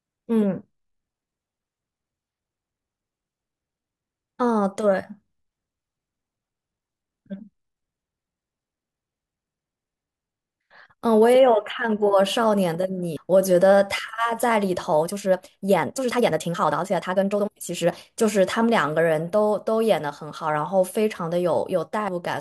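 At 6.39 s the speech jumps forward by roughly 0.4 s. This is compressed frames skipped: a run of coded frames was either missing or rejected by the decoder as damaged, so that stretch of audio is never played. The same fault happens again at 13.17 s, skipping about 0.3 s. Both gap sizes fit whole frames of about 93 ms.

From 14.99 s to 18.05 s the pace suddenly runs about 1.72 times faster while the pitch stays where it was. This is a time-stretched section, likely caused by software squeezing the passage into a shorter length by dropping short slices of the waveform to keep the pitch. That dropping is what makes the speech sound rushed through this span.

At 22.08 s a final compressed-frames skip cuts out about 0.1 s, which is roughly one frame.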